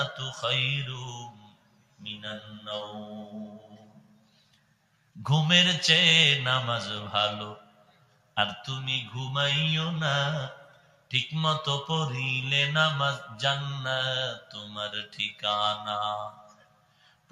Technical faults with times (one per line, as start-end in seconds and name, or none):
0.00-17.32 noise suppressor applied to music or sounds
1.28-2.03 sound cut by the noise suppressor
3.52-5.17 sound cut by the noise suppressor
7.56-8.37 sound cut by the noise suppressor
10.57-11.12 sound cut by the noise suppressor
14.39-14.75 sound cut by the noise suppressor
15.05-15.43 sound cut by the noise suppressor
16.31-17.32 sound cut by the noise suppressor